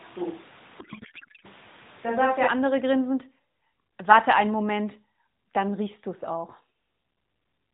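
From the start until 2.47 s, just before "andere grinsend", the speech sounds roomy and hollow, with thin bass. It is likely a switch to a distant microphone. The level hardly changes, and room noise sits about 20 dB below the speech.

From 0.80 to 1.47 s, a codec payload misread turns the speech into garbled noise and warble. The receiver likely unpacked octet-aligned AMR frames as bandwidth-efficient ones. Fields landed in the wrong places. Through the narrowband AMR path, which sounds like the 12.2 kbps mode, the rest keeps its 4 kHz ceiling.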